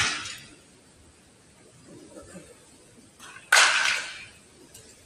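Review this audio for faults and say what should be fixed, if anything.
A speech-tuned noise suppressor stayed active through the whole clip, treating steady tones and decays as noise, so the level pumps with swings of about 20 dB.

Between 0.64 and 1.57 s, that noise suppressor cut a sound by up to about 4 dB for roughly 0.7 s in total, sinking it in level.

Disable speech noise suppression, or switch it to a music mode, whenever the input is not speech.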